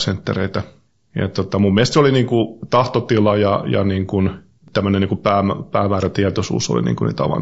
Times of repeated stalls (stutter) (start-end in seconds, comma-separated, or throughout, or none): none